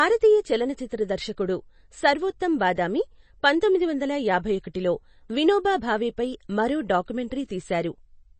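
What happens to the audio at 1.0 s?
At 1.0 s the speech carries the same damage heard across the whole clip, most likely from MP3 compression. Nothing sounds above 8.3 kHz, so the treble is cut off flat. The encoder is starving for bits, which fits a very low rate near 32 kbps. It drops weak frequency lines, and they flicker on and off between frames. The result is plainly audible: a watery, swirling texture, with smeared onsets.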